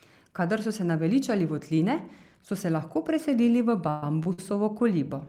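From 3.87 to 4.39 s the speech drags and stutters, with four brief holds where the last sound is stretched, the longest about 133 ms. These repeated stalls (stutter) come from packets arriving late, so the jitter buffer kept running dry and the receiver held sound over roughly 40% of that span.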